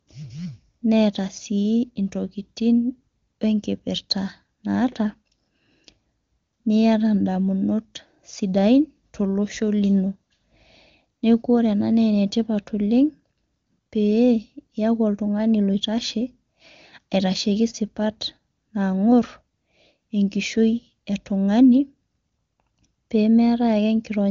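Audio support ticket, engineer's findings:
Nothing to flag on this one: the speech sounds like ordinary HD Voice wideband audio, which fits the AMR-WB codec at its top 23.85 kbit/s mode, with the high end rolling off at about 7 kHz as that path normally does.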